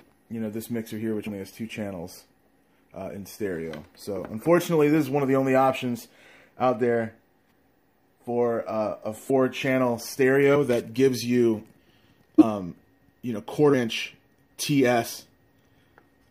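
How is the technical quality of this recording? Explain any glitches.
The recording has five short dropouts where compressed frames were skipped. These come at 1.26 to 1.29 s, 7.48 to 7.53 s, 9.29 s, 12.38 to 12.44 s and 13.73 s. At each point whole frames of the encoded stream were either missing or rejected as damaged by the decoder, so playback jumps ahead. About 70 ms is lost at each of the first two, about 50 ms at the next two, and about 100 ms at the last. Each one is heard as a sudden jump in the audio, with a brief blip or click at the join.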